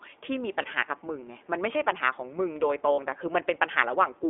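Throughout, the speech carries the iLBC codec sound. The band stops near 3.5 kHz, with a rough, slightly synthetic edge from the codec, which works in 20 ms frames.

Lost iLBC frames appear at 0.62–0.66 s and 2.92–3.00 s. The decoder holds a buzzy vowel, then recovers almost at once.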